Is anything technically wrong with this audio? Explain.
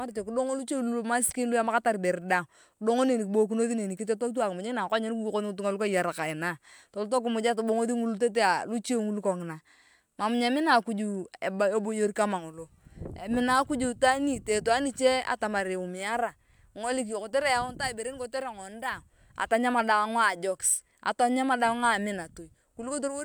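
No, nothing here sounds technically wrong to me; this bit of speech comes across just fine from one end to the other.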